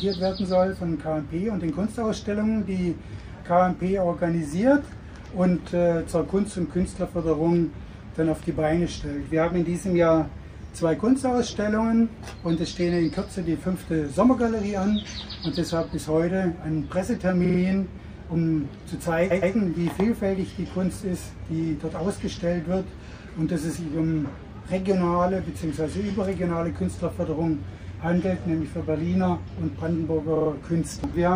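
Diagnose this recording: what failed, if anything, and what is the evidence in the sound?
Repeated frames in the codec or storage stage: at 17.44 s a 46 ms block plays three extra times, at 19.30 s a 116 ms block repeats twice more, and at 30.35 s another 46 ms block repeats three times. The block lengths suggest runs of compressed frames written more than once. Unlike an underrun or dropout, nothing is lost; the audio gets longer. Unlike echo, the copies are identical and do not decay.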